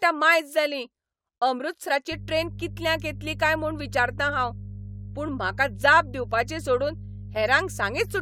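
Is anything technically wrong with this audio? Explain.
Yes, there are three faults.

At 1.87 to 1.91 s the speech lurches forward: compressed frames were skipped, dropping roughly 50 ms of audio.

From 2.12 s to the end a steady low 50 Hz drone sits beneath the speech, around 15 dB below it. This is mains hum leaking in from the power line.

At 7.35 s a short glitch appears, fairly quiet at around -30 dBFS. A single corrupt frame was decoded, scattering energy into the wrong frequencies.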